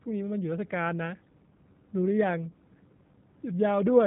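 The audio has been passed through the G.729 codec, most likely its lighter Annex A variant, for the whole clip. Rather than storing the waveform, the codec rebuilds the speech from a vocal tract filter, a pitch predictor and a few sparse pulses per frame, at a rate consistent with 8 kbit/s. Everything above about 3.8 kHz is gone, so the speech sounds muffled and boxy, with a plainly audible rough, synthetic buzz.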